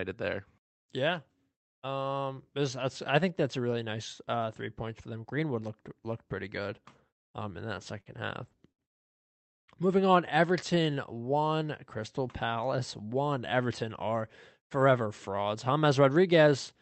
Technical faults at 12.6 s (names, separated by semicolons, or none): jitter buffer slow-down